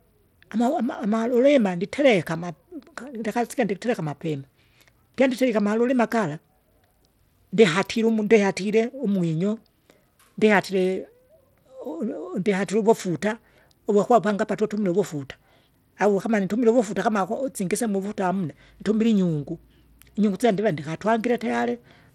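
The speech runs throughout through what is likely Bluetooth SBC compression at a starved bit pool, which fits roughly 96 kbps. With too few bits, upper sub-bands flicker out and the rest carry gritty quantisation noise and aliasing, and nothing sounds above 19.5 kHz.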